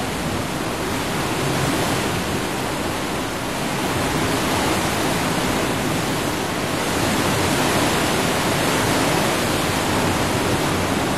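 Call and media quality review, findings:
No audible faults found.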